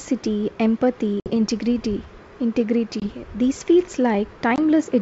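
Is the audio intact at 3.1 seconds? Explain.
No. Packet loss on an ADPCM call from 3.00 to 3.07 s drops about one 20 ms packet, which is filled with silence. This desynchronises the decoder's predictor and step size, so speech returns slightly distorted.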